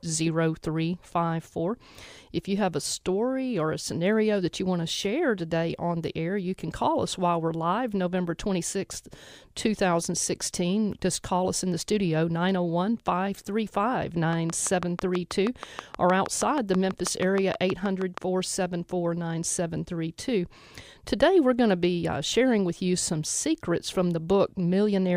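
Interference from nearby equipment or a faulty connection or power supply is likely injecting pulses, producing a train of clicks from 14.33 to 18.19 s: about thirty similar, evenly spaced ticks at 6.24 per second, standing roughly 15 dB above the speech and audible through pauses.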